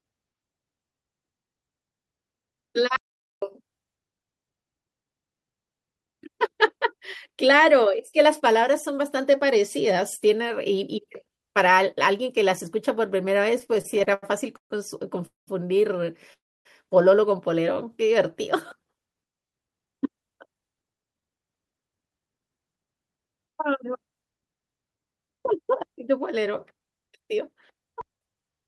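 Speech that suddenly goes dead from 2.96 to 3.42 s: an audio dropout to silence, where the sound stops abruptly and leaves pure silence with no room tone before cutting back in mid-flow. The most likely cause is that the input was lost for those 0.46 s, through a disconnected device, a failed link or a mute, while the recorder kept writing silence, so whatever was spoken in that gap is gone. From 13.59 to 14.72 s the speech catches and drags in repeated stalls, a stutter of ten small hesitations where the last sound is held and stretched, the longest about 138 ms. Together they add 329 ms, close to a third of that stretch. This is the jitter buffer running dry again and again as packets came in late, with the receiver filling each wait by continuing the previous sound. Nothing is lost, but the flow is broken up. Two separate call audio freezes follow, at 15.26 to 15.49 s and at 16.33 to 16.67 s. 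In each, the last sound hangs as a brief buzz or hiss that fades out, leaving 150 ms and 280 ms of silence respectively, before speech resumes exactly where it stopped. The likely cause is packets held up in transit, so that 209 ms and then 320 ms of delay are inserted with nothing missing. From 19.51 to 22.26 s the speech sounds hurried, running at 114% speed with the pitch unchanged. This is a jitter buffer speed-up: holding more audio than it aims for, the receiver trimmed short pitch-period slices, about 0.4 s in all, to bring its backlog down.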